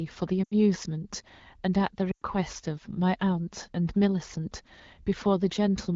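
At 0.43 to 0.55 s and again at 2.11 to 2.23 s, the speech quickly drops to near silence before returning weakly. These are lost AMR speech frames, where the wideband decoder repeats the last good settings with falling gain, about 80 and 100 ms respectively.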